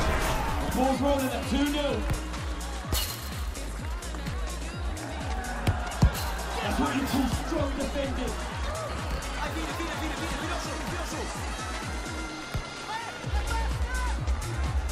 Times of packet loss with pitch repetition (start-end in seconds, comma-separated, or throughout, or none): none